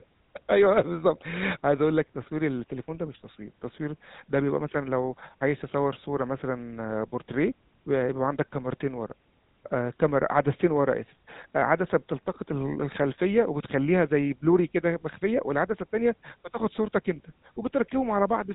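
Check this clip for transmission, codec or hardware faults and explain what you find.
The speech carries one fault, present throughout: the GSM full-rate codec. It models the vocal tract and excites it with sparse, regular pulses, which fits a 13 kbit/s rate. Nothing passes above about 3.8 kHz. The damage is plainly audible as a buzzy, gravelly roughness.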